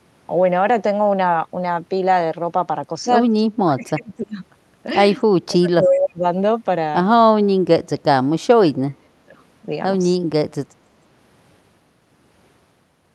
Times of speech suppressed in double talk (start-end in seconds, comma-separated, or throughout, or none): 3.55-4.40, 5.33-6.24, 7.31-8.06, 8.51-9.36